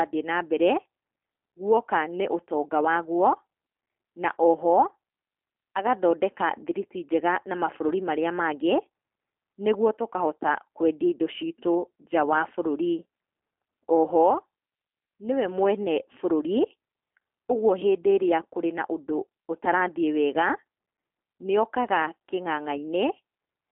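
From start to end, the speech carries G.729 codec damage, plainly audible throughout. The sound is squeezed into a telephone band of roughly 250 Hz to 3.4 kHz, and nothing reaches above 3.5 kHz. The codec rebuilds each 10 ms frame from a vocal tract model, a pitch predictor and a few pulses. That coarse rebuild makes the speech rough and slightly synthetic. The damage fits an 8 kbit/s G.729A stream.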